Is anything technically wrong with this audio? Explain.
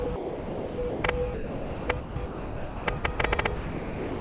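Yes. From 0.04 to 1.04 s and again from 1.34 to 3.18 s the sound is chopped by the voice detector. It cuts in and out repeatedly. The likely cause is the sender's voice detector classifying quieter passages as background and switching transmission off and on, with comfort noise filling the gaps. About 0.78 s is replaced in the first stretch and about 1.38 s in the second.

At 3.56 s the sound is dropped by the voice detector and does not return before the clip ends. The final 0.65 s or so is steady comfort noise with nothing of the original in it. This is likely the detector deciding the remaining material was background and stopping transmission, leaving the receiver to generate noise in its place. Throughout, nothing is heard above 4 kHz, which fits a narrowband call codec such as G.711.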